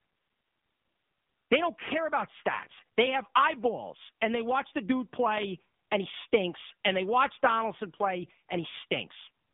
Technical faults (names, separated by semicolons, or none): AMR narrowband mobile codec